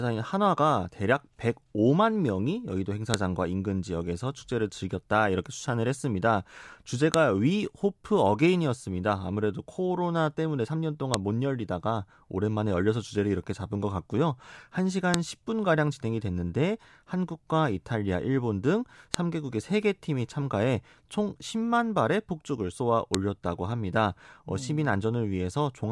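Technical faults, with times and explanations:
3.14, 7.14, 11.14, 15.14, 19.14 and 23.15 s, file header played as audio: the speech arrives in 4-second pieces joined without stripping each piece's WAV header, so those header bytes play as raw samples, producing a sharp, loud click at every seam regardless of the speech underneath.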